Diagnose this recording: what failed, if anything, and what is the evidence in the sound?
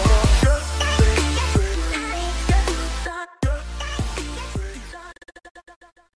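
Nothing failed, and there is no evidence in the sound of a fault at any stage.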